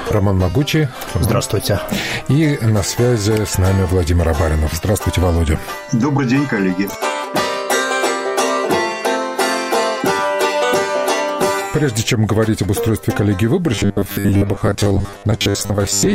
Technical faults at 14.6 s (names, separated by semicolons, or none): robotic sound from repeated short buffers